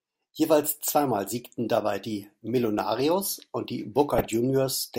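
Near the end of the speech, just after "und die", the audio breaks into DAB burbling from 4.15 s to 4.34 s. Weak reception lets bit errors slip past the error correction into the MP2 data, so corrupted samples put short blips of noise into single sub-bands and corrupted scale factors throw individual sub-bands up or down in level for up to a frame. Across this stretch, which fits about a dozen frames at an error rate of around a tenth of a percent, it comes through as burbling laid over the programme.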